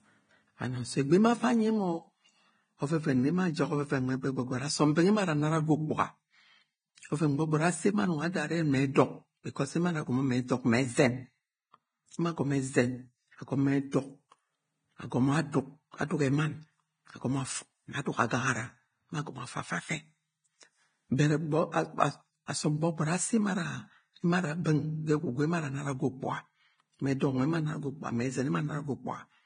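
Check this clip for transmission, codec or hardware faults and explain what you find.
The speech carries two codec faults: heavy compression damage across the whole clip, and one pre-echo.

Throughout, the treble is grainy and hissy, with nothing above 9.7 kHz, and tones and attacks sound roughened and blurred. This is likely Vorbis compression at a low setting, and the amount of damage fits a bitrate of around 22 kbps. The encoder keeps a smooth spectral outline but quantises the fine upper detail so coarsely that it turns into noise of similar energy. A plain low-pass filter would sound dull but clean, without this hiss.

At 13.92 s, pre-echo puts a brief smear of hiss about 13 ms ahead of a sharp attack. The transform block holding the onset spreads its quantisation noise across its whole length, so the noise needed for the loud part leaks into the quiet moment just before it. Unlike a click or dropout, it is a soft wash that comes before the transient and blunts it.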